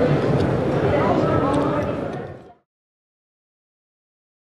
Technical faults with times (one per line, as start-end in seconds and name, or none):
none